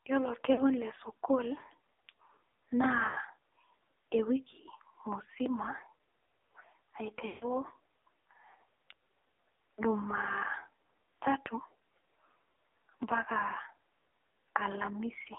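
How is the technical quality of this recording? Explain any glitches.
Quality is poor: the speech has passed through a heavily compressed mobile link, with three dropouts.

AMR narrowband mobile codec, throughout: the audio is confined to roughly 300 Hz–3.7 kHz, and its buzzy, synthetic texture points to a low mode near 6 kbps.

Lost AMR speech frames at 0.54–0.61 s (40 ms), 3.08–3.17 s (60 ms) and 7.28–7.46 s (140 ms): the decoder repeated stale settings while fading them, producing drawn-out, fading sound, with the longest smearing into near-silence.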